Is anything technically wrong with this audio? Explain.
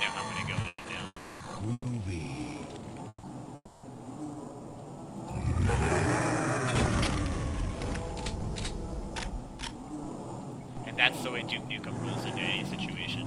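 Yes. There are three kinds of fault, all from packet timing on a call.

Repeated stalls (stutter) run from 0.61 to 1.86 s. Packets kept arriving late or slower than playback, so the jitter buffer emptied three times. The receiver bridged each wait by extending the last sound, 310 ms in total and 160 ms at the longest, which is about a quarter of that stretch. Nothing is lost, but the audio drags and hiccups.

Call audio freezes occur at 1.06–1.42 s, 3.08–3.25 s and 3.55–3.85 s, and are likely caused by packets being held up in transit until the buffer ran dry. Each time, the last sound is stretched into a fading buzz or hiss, lasting 340, 150 and 280 ms, with 30 to 40 ms of silence at the end. The sound then resumes where it stopped, so a gap is inserted rather than anything removed.

A jitter buffer speed-up runs from 9.58 s to 13.25 s. The buffer had built up more delay than it targets, so the receiver trimmed short pitch-period pieces repeatedly, removing about a third of a second in all. 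Playback runs at about 108% speed with the pitch unchanged, so the end of the clip sounds hurried.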